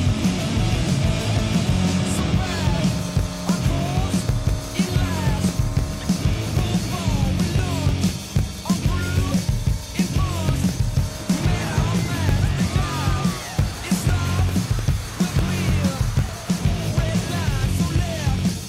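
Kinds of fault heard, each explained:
Periodic USB or driver dropouts: Something is interrupting the audio path every 0.1 s, and each time roughly a millisecond of sound is lost and replaced by silence. The gaps sit evenly from about 0.09 s to 18.59 s. They come through as a steady train of ticks, ten a second, heard only where sound is present.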